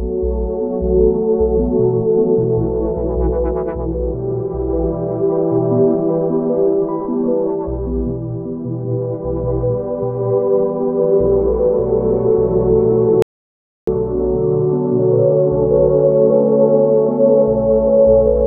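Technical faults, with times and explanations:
13.22 to 13.87 s, audio dropout to silence: the sound cuts off abruptly and returns about 0.65 s later, with the gap holding silence and no background noise. The input was likely lost briefly while the recorder kept writing silence, so that stretch is gone.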